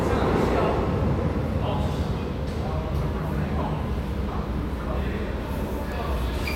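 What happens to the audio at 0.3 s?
Nothing goes wrong at 0.3 s; the audio plays through that moment intact, with no dropout, click or other fault.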